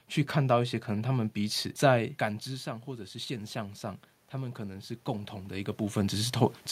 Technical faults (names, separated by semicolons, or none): automatic gain rising